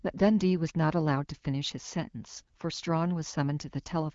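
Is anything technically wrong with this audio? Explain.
No, nothing here is technically wrong.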